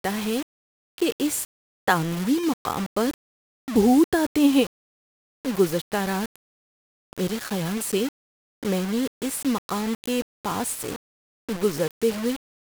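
Throughout the speech, grainy distortion follows the signal, sitting only about 15 dB below it, which fits likely low bit depth without dither at 5 bits.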